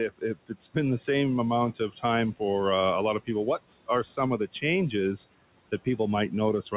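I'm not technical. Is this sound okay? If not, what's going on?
No, not quite. Throughout, you can hear noise suppressor artifacts. The call's noise filter keeps pushing the background noise down whenever nobody's talking and letting it creep back under the talking.

There are also two spots of speech cut by the noise suppressor, where the filter mistook bits of the talking for background and turned them down. From 0.09 to 0.56 s, just before "been the same amount", and again from 1.76 to 2.04 s, between "been the same amount" and "for uh a lot", short pieces sound swallowed or faint. The first dip is the deeper one.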